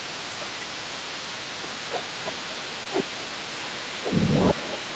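A speech clip carried over a call, with one short concealed packet loss at about 2.83 to 2.87 s. Roughly 20 ms of audio never arrived. The receiver filled the gap by extending the preceding sound, then blended back into the real signal. The result is a brief smear or wobble. The call path's band limit holds throughout, with nothing above about 8 kHz.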